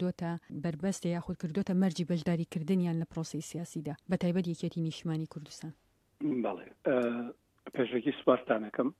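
No technical faults can be heard anywhere here.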